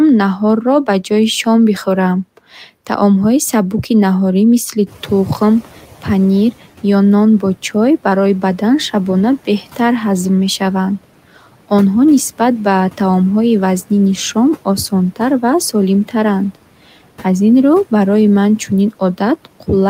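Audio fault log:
4.86 to 6.51 s, noise suppressor catching up: room noise jumps by about 15 dB at around 5 s, to roughly 22 dB below the speech, and for 1.65 s it passes with little reduction while the suppressor's noise estimate lags. Once the estimate adapts, the noise drops by about 8 dB.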